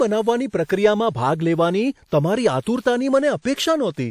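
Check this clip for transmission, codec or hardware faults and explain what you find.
Pre-echo occurs four times, at 0.65, 2.07, 2.64 and 3.41 s, spreading 39, 48, 30 and 37 ms before each attack. The block's quantisation noise leaks ahead, heard as brief hiss blurring onsets, visible as broadband smear preceding each waveform spike.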